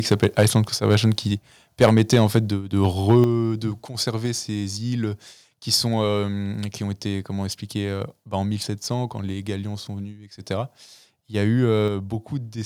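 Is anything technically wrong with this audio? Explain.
Yes. Two faults are audible.

Microphone overload occurs at 0.11 to 0.46 s, 0.9 to 0.95 s, 1.81 to 2.38 s and 2.84 to 3.16 s. The loudest peaks run about 3 to 7 dB past the converter's ceiling, so a few percent of samples are flattened. The likely cause is input gain set too high. The speech takes on a harsh, crackling edge.

The microphone volume is stepped down at 1.89 s, 3.24 s and 11.88 s, by about 4, 6 and 4 dB. Each drop is sudden. The first two follow the clipped passages closely. This points to the call software likely cutting the input volume after detecting overload.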